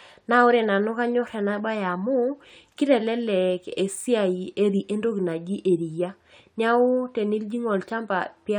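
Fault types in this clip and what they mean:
Gap between stream segments: Two pieces of the speech stream were timed with a small space between them. The player filled that space with silence. At 4.01 s a hard-edged hole of 3.7 ms cuts in. No sound is lost. Everything after simply arrives slightly later.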